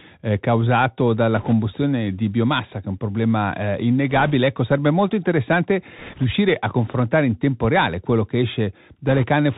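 From the start the whole clip sits on a Bluetooth CVSD headset codec, and you can plainly hear it. CVSD sends one bit per sample saying up or down and adapts its step size. The band stops at 4 kHz, so the speech sounds boxed in. The step can't keep pace with loud high content, which smears, and the s sounds come out scratchy over a grainy hiss. It all fits the 64 kbps CVSD stream.

On top of that there are four short bursts of bit errors on the Bluetooth voice link, at 1.36 to 1.53 s, 4.10 to 4.32 s, 5.99 to 6.24 s and 9.07 to 9.25 s, with a few percent of bits flipped in each. Because no CVSD bit outweighs the others and the damage fades out on its own, you don't get sharp clicks. Each burst is a brief rushing, crackly wash laid over the speech.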